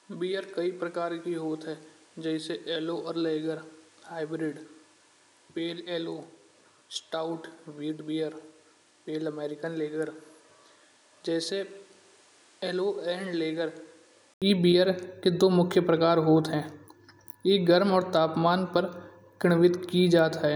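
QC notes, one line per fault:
0.0–14.42 s, input switched to a poorer device: speech sits about 10 dB quieter, stops at 11.4 kHz and carries its own noise around 30 dB down, then an 80 ms gap and it opens up. Likely a narrower, noisier mic until the switch.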